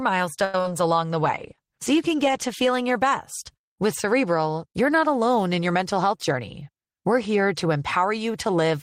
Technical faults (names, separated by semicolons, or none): repeated packet loss (robotic sound); call bitrate drop; jitter buffer speed-up